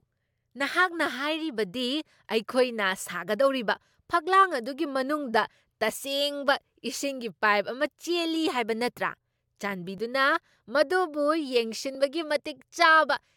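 At 9.98 s and again at 11.95 s the speech jumps with a tiny skip, the sign of an overlap between stream segments. Two neighbouring segments claimed the same stretch of time, and joining them discarded sound that had never been duplicated: about 8 ms at the first point and 6 ms at the second. The roughly 2 s spacing matches the segment length. Unlike a dropout, nothing goes silent; audio is missing and the waveform snaps straight across.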